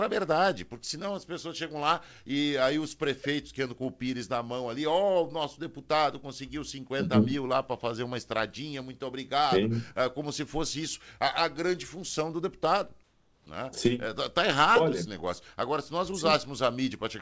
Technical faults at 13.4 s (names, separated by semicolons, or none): comfort noise in place of the background